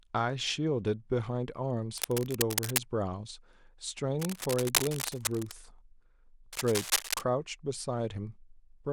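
Cable scratch noise, likely from a worn cable or connector being moved, adds rough, crackling bursts to the speech from 1.97 to 2.78 s, 4.19 to 5.52 s (slightly quieter) and 6.53 to 7.22 s, roughly as loud as the speech itself.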